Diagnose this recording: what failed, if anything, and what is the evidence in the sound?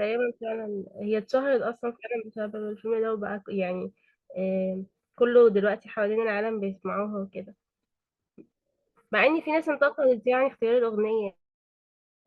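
Nothing failed: no stage from capture through playback leaves an audible trace anywhere in the speech.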